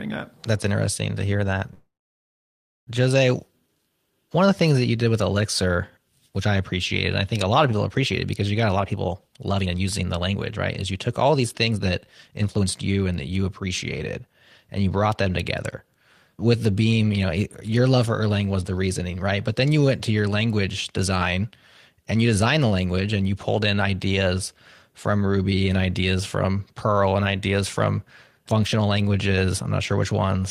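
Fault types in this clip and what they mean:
Call audio freeze: Just after "interesting to hear that", at 1.73 s, the speech stalls for about 1.14 s. A brief fading continuation gives way to about 1.0 s of silence before the speech resumes at 2.89 s exactly where it left off. The likely cause is delayed packets emptying the jitter buffer. Unlike a dropout, no speech is lost. A pause is inserted, and everything after it runs 1.14 s later.
Jitter buffer speed-up: From 8.68 s, after "appreciated because you got", until "and you brought them" at 14.35 s, the speech runs at about 120% speed and sounds hurried. The receiver trims short pitch-period slices again and again to shrink an overfull buffer, removing about a second in all. The pitch stays where it was, which is what separates this from simply playing the audio faster, where the pitch would rise along with the pace.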